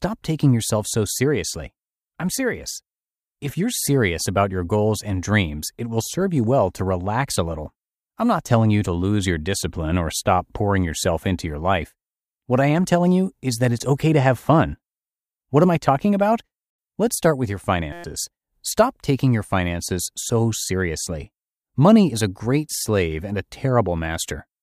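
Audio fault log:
17.93–18.04 s, system hang loop: after "start with your", a 5.8 ms piece repeats 20 times as a 172 Hz buzz while the system froze, fitting a 256-sample buffer.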